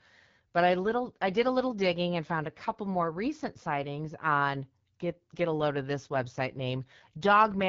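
From start to finish the speech carries the sound of the AMR wideband (HD Voice) codec at a very low rate, which fits the 8.85 kbit/s mode. With so few bits the pulse-driven vocal tract model cannot follow the voice closely, so it sounds rough and raspy throughout. On a spectrogram, energy stops near 7 kHz, and the strip from 6.4 to 7 kHz shows smeared noise without the harmonic striations seen below it.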